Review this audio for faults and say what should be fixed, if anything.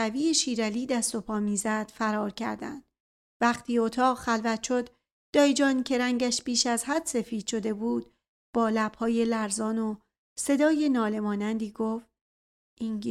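Nothing needs fixing; no faults can be heard here.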